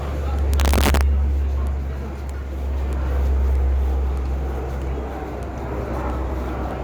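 From about 0.54 to 1.01 s there's integer overflow: the level runs roughly 1 dB past the integer ceiling, and instead of being clamped, the peaks wrap around to the opposite sign. Each one flips across the full range, so you get harsh cracks, sharper than ordinary clipping.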